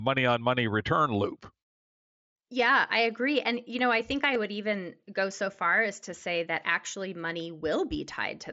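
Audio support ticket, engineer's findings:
Concealed Bluetooth headset packet loss at 4.34 s, between "know I think I" and "would even go so". Headset-to-phone link dropped about 15 ms of audio, which fits two lost packets. Receiver bridged the gap by repeating a best-matching recent stretch of waveform, so the gap is filled rather than left as a dropout. Link runs the mSBC headset codec, audible as wideband audio with light coding grain.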